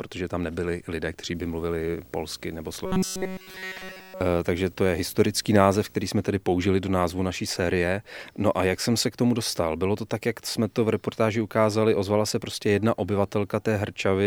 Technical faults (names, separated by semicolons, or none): video or display buzz; robotic sound from repeated short buffers